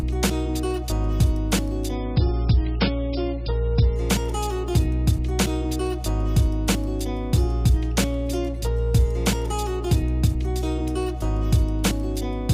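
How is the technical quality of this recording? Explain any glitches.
One glitch stands out: an adaptive stream at a lower bitrate from 1.96 to 3.96 s. A slowed connection forced a lower-bitrate version, so the sound abruptly loses everything above 5.6 kHz and codec artefacts rise, with no gap, consistent with a drop from about 128 to 16 kbit/s MP3.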